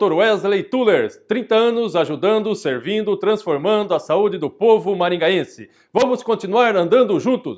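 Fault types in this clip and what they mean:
Nothing stands out here: no dropouts, glitches or distortion turn up anywhere in the audio.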